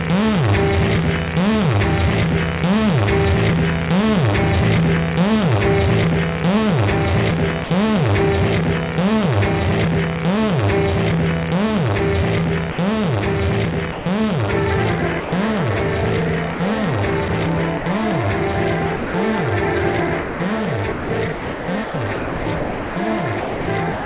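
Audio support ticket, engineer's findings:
Sound dropped by the voice detector, likely sender VAD misclassifying sound as background: short stretches swapped for steady comfort noise at 7.64–7.70, 12.72–12.78, 13.92–14.06, 15.20–15.32 and 18.96–19.14 s, gaps of 60 to 180 ms.

Sound chopped by the voice detector: likely sender VAD toggling on and off repeatedly, with comfort noise filling the off periods. About 160 ms lost across 16.54–17.86 s and about 1.96 s across 20.22 s to the end. The result is choppy sound. The band stops at 4 kHz throughout, which fits a G.711 call path.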